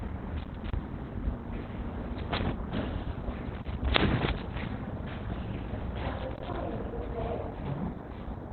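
Heavy codec damage throughout: the audio sounds muffled, hoarse and narrowband, likely Opus compression falling back to its speech (SILK) mode at a low rate, around 12 kbps.

Loose connector crackle at 0.37 to 0.74 s, 3.45 to 3.86 s and 6.18 to 6.56 s: a faulty contact repeatedly breaks the signal, producing irregular bursts of scratchy crackle.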